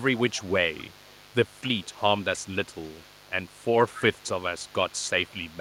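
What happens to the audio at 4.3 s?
Mains buzz runs under the sound at 4.3 s, as it does for the whole clip: a steady, raspy buzz about 30 dB below the speech. Switching spikes on the 50 Hz supply fill the spectrogram with evenly spaced horizontal harmonic lines reaching into the kilohertz range, and show as a fine repeating ripple on the waveform.

An echo leak is also present at that moment, spanning the clip from start to end. A faint copy of the speech returns about 0.27 s late, roughly 30 dB down, likely because a far-end echo canceller did not fully remove loudspeaker sound picked up by its microphone. The spectrogram shows a weak, delayed ghost of the speech pattern.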